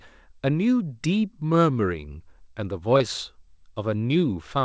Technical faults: short concealed packet loss

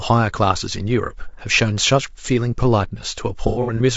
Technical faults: low-delay AAC compression; AAC frame loss with concealment

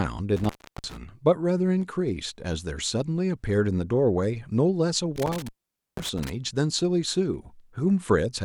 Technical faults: intermittent contact

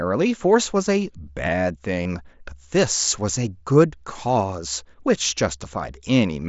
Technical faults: concealed Bluetooth headset packet loss

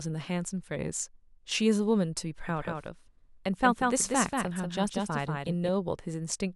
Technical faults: doubled audio track

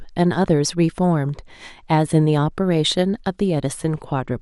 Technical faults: MP2 compression

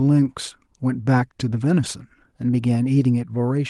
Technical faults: none

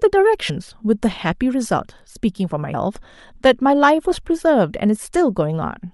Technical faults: compressed frames skipped

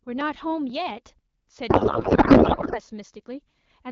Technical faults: periodic USB or driver dropouts; codec payload misread

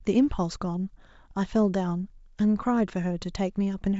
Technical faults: none

